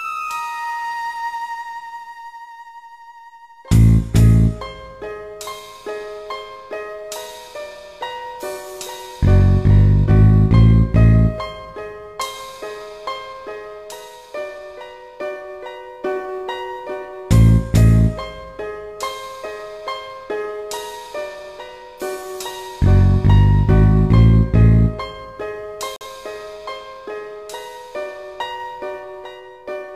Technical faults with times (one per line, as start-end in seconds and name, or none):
25.96-26.06 corrupt frame muted